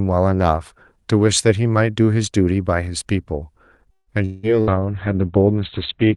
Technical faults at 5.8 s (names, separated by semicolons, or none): call bitrate drop